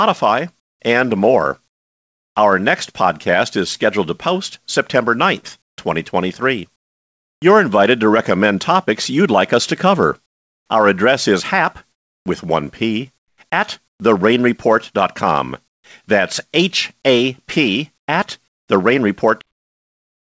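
In the speech pauses at 0.60–2.36 s, 5.62–7.42 s (ending just before "invited to recommend topics"), 10.26–14.00 s (right after "like us to cover"), 15.68–15.84 s and 17.98–18.68 s, the room tone turns into a flat, featureless hiss. This is comfort noise in place of the background, likely from discontinuous transmission. Unlike a noise gate, the pause never goes silent. At 15.7 s the hiss sits about 20 dB lower. At 19.41 s the audio has a cut-off end: the sound stops mid-way and drops straight to digital silence with no decay, not a fade-out. Through all of it, nothing is heard above 8 kHz, which fits a G.722 call path.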